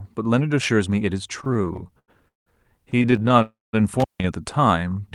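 From 1.41 to 2.48 s and again from 2.90 to 3.42 s the speech shows repeated stalls (stutter): late packets drained the jitter buffer 18 and then 14 times. Repeated sound, 450 ms in all in the first span, is inserted as smeared, stretched bands on a spectrogram. The longest wait is 184 ms.

From 3.42 to 3.75 s a call audio freeze holds the last sound as a fading buzz or hiss, then about 190 ms of flat near-silence in the waveform. The likely cause is held-up packets, adding 308 ms of delay.

Between 4.00 and 4.24 s an intermittent contact opens for about 158 ms: crackle spikes at both edges and a thin hiss floor in between.

From 4.68 to 5.02 s a jitter buffer slow-down repeats pitch periods, adding 64 ms and running at 84% speed. Spectrogram harmonics stay level but stretch out.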